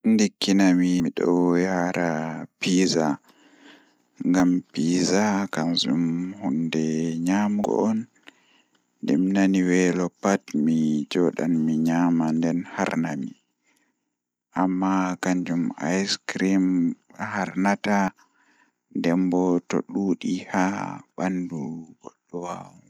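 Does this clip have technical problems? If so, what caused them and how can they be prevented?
Yes. At 1.0, 4.4, 7.64 and 18.08 s the speech jumps abruptly, and short stretches of about a tenth of a second, a few hundredths, and so on are simply missing, with no silence in their place. This is likely a dropped buffer (overrun): captured samples were overwritten before being read, so the two sides butt together. A waveform shows a sudden discontinuity and a spectrogram a thin vertical broadband line. Larger capture buffers and a higher-priority recording thread prevent it.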